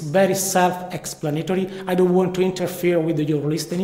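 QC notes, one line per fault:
throughout: clock drift between sender and receiver. The sender's audio clock runs roughly 4 percent slower than the receiver's, so the jitter buffer keeps draining and the receiver has to fill the gap. The audio gains small timing hiccups, unevenly spaced, rather than a steady flow.
0.06 to 3.73 s: repeated timing corrections. To keep up with the slow sender, the receiver repeatedly repeats short pieces, stretching the audio to 97 percent speed and adding roughly 150 ms overall. The tempo sounds slightly dragged and unsteady, with faint uneven stutters.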